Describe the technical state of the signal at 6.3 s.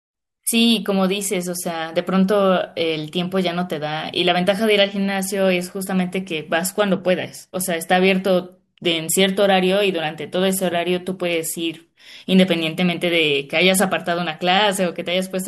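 At 6.3 s the speech signal is intact, with no technical fault present at that moment.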